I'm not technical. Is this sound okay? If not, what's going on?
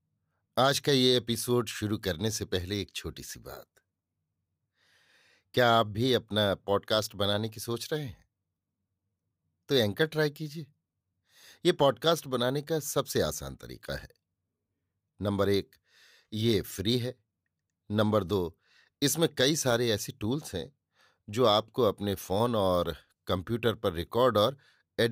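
Yes, this recording sounds fine, with nothing going wrong anywhere in it. The speech comes through steadily the whole way, without any dropouts, jumps or odd noises.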